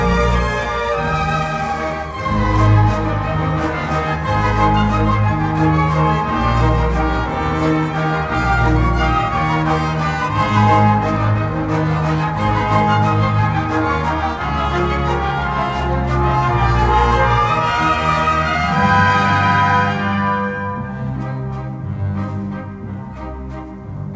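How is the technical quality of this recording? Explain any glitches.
Nothing stood out on listening; the sound comes through a call path with its content stopping around 8 kHz, which fits a wideband codec such as G.722, and no glitches could be heard anywhere in it.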